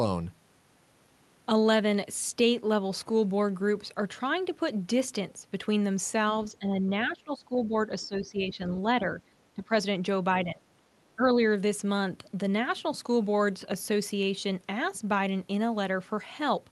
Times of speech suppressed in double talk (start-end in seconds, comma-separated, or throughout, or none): 6.53-9.06, 9.55-9.72, 10.44-10.65, 11.16-11.36